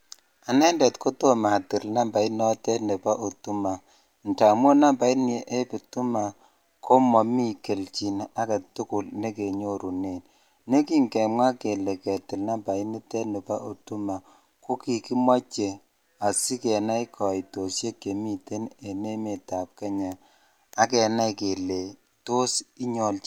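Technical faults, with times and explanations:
Nothing technical stands out in this speech recording; there's no glitch or fault to point to anywhere.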